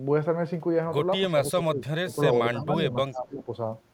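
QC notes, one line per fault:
QC notes, one line per fault:
1.32–2.18 s and 2.53–3.50 s, speech suppressed in double talk: the speech level dips sharply in pieces across both stretches, by around 25 dB at worst in the first and around 20 dB in the second, with roughly 0.7 s of each affected. The likely cause is an echo canceller that could not tell the local talker from loudspeaker echo while the far side was also speaking, so it attenuated both.
3.12–3.20 s, echo leak: a brief, faint scrap of delayed speech, about 35 dB below the main level, arrives roughly 306 ms behind the original. It sounds like a quiet ghost of the speech trailing inside the second suppressed stretch. This is likely loudspeaker pickup on one side of the call that its echo canceller failed to remove fully, so a residual copy was sent back down the line.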